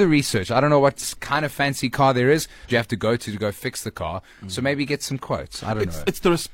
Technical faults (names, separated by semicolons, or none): damaged data in a compressed stream